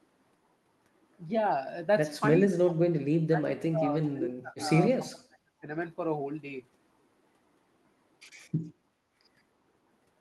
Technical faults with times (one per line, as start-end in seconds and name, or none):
2.39-4.71 speech suppressed in double talk
4.98-5.67 speech suppressed in double talk
8.98-9.14 background gated by the echo canceller